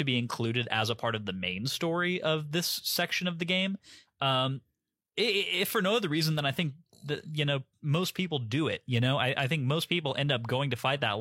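No technical faults can be heard in the speech at any point. There is nothing to flag from the first moment of the clip to the last.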